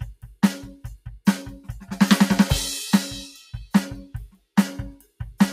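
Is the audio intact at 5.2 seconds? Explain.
No. At 5.2 seconds the music is still under a noise suppressor applied to music or sounds, active throughout the clip. Built for speech, it treats sustained tones and tails as noise, so held sound sinks by roughly 5 dB while attacks pass, pumping. A waveform shows the envelope dipping between onsets, and a spectrogram shows decaying tails cut short.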